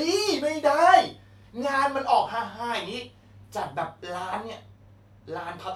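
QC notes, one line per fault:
No faults heard in this clip.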